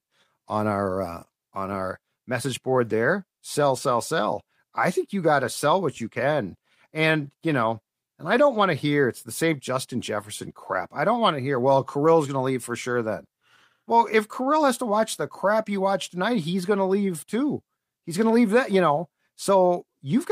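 No technical faults are audible.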